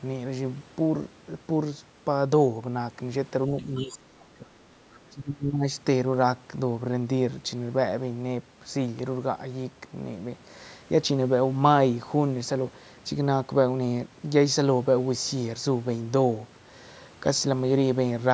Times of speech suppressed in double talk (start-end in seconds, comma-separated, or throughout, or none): 3.48-4.57, 5.09-5.66